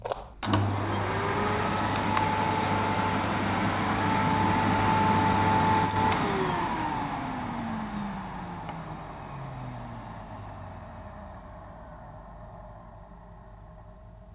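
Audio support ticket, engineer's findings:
No faults found in clip.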